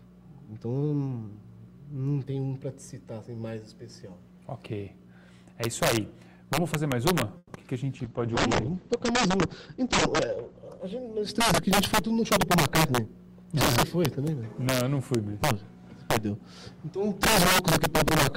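Integer overflow runs through the whole clip. The gain drives peaks about 11 dB past full scale, and a few percent of samples exceed the limit. Instead of being held at the ceiling, each of those samples wraps to the opposite extreme, so every loud peak becomes a violent crack. The cracks are much harsher and more abrupt than clipping, which only flattens the tops of waveforms and gives a duller, fuzzy distortion.

From 7.37 to 7.51 s there is a call audio freeze, most likely caused by packets held up in transit until the jitter buffer ran dry. The last sound is stretched into a fading buzz for 120 ms, with the final 30 ms going silent. When the audio resumes, it picks up exactly where it stopped, so nothing is lost, only delayed by 120 ms. That is what separates it from packet loss.

Just after the freeze come two instances of short concealed packet loss, at 7.55 to 7.58 s and at 7.62 to 7.65 s. 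Each time, about 20 ms of audio never arrived. The receiver filled 10 ms by continuing the preceding sound and then blended back into real audio. The result is a brief smear or wobble in which content actually disappears, unlike the freeze, where the audio was merely postponed.

A jitter buffer speed-up follows from 12.15 to 13.54 s, running at 105% and dropping about 70 ms. A second one at 107% runs from 13.95 to 14.44 s and removes about 40 ms. Holding too much audio, the receiver cuts short pitch-period pieces again and again, so the sound hurries along while its pitch stays unchanged. That sets it apart from a plain resampling speed-up, which would raise the pitch as well.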